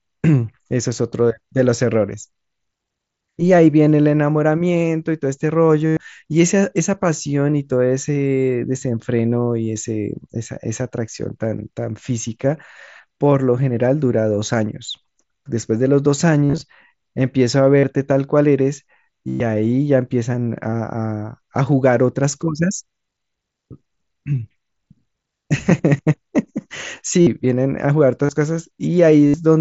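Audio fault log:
5.87–5.97, 16.45–16.61, 17.80–17.84, 19.29–19.40, 20.72, 27.21–27.27, 28.26–28.29 and 29.27–29.34 s: concealed Bluetooth headset packet loss. Voice packets between headset and phone dropped, so the receiver filled each gap with copies of the best-matching recent waveform. This produces brief buzzy tones held at full level, with a small warble as real sound returns.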